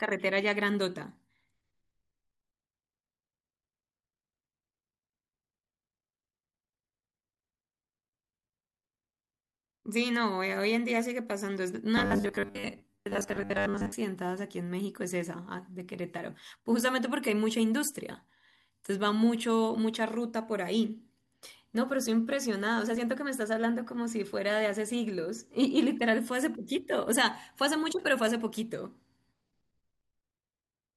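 Robotic sound from repeated short buffers runs from 11.97 to 13.93 s: for those two seconds the voice collapses into a rigid, metallic buzz pitched at 100 Hz, still tracing the rough shape of the speech. That fixed pitch means a 10 ms slice is being looped, most likely because new audio stopped arriving in time and playback kept reusing the last chunk, so the majority of this stretch is repeats rather than real sound.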